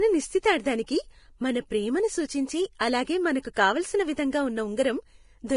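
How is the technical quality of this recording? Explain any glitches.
The speech is heavily degraded throughout by low-bitrate coding, with two brief pre-echo smears on top.

Vorbis compression, likely the cause across the whole clip, coarsely quantises the residue above its spectral floor, a level of damage consistent with roughly 31 kbps. Nothing survives above 10.6 kHz, and the remaining treble turns to hiss and grain, roughening the speech and blurring its attacks.

Pre-echo occurs at 2.78 to 2.81 s, after "మన ప్రేమను సూచించే" and before "అలాగే మనకు కావలసిన", and again at 3.54 to 3.57 s, after "ప్రేమను సూచించే అలాగే మనకు". Quantisation noise spreads across the transform block into the quiet before each attack, so a hiss runs 22 ms and 30 ms ahead of the onset and softens it.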